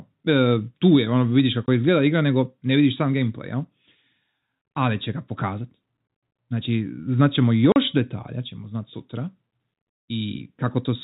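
Packet loss filled with silence chops the speech twice: a 20 ms hole from 1.66 to 1.68 s, right after "tu je ono vidiš", and a 40 ms gap from 7.72 to 7.76 s just before "detalja ćemo znat sutra". The lengths fit one and two 20 ms packets dropped and replaced with dead air, so each hole has hard edges.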